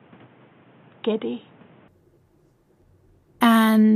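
Input switched to a poorer device, from the start to 1.88 s: the sound is narrow and boxy, with nothing above 3.8 kHz, sits about 5 dB quieter, and carries a new background noise roughly 30 dB under the signal. At 1.88 s it clears up abruptly with no gap. The likely cause is the system recording through a lesser microphone or headset profile first, then changing input mid-capture, bringing its own bandwidth, level and noise.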